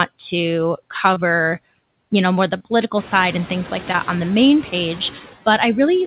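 Speech recorded over a call path, and everything tops out at 4 kHz, which fits a narrowband G.711 mu-law link. The main thing running through the whole clip is noise suppressor artifacts: the suppressor pulls the room noise down by about 18 dB in the gaps between phrases, then lets it back up under the speech, so the background pumps in and out. After about 3 s the room noise itself comes up by roughly 13 dB and the suppressor has more to chew on. On top of that there are three bits of short concealed packet loss, at 1.14 to 1.18 s, at 2.58 to 2.62 s between "you know more the" and "side and things like", and at 3.92 to 3.96 s between "side and things like" and "on the main". Each hole is about 20 ms, which fits a single dropped packet. The receiver papers over it by stretching the last bit of sound and then crossfading back into the real audio, so what you hear is a quick smear or wobble rather than a clean gap.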